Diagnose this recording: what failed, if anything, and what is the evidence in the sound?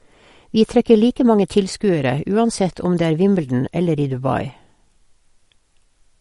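Watery, swirly speech throughout, with nothing above 11.2 kHz: a codec-stage fault, likely MP3 compression near 48 kbps cutting treble and zeroing weak lines.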